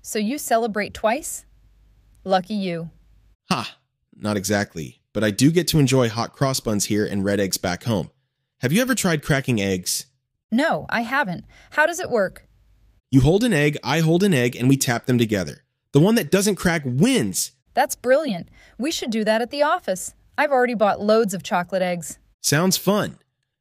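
No technical faults can be heard anywhere in the signal.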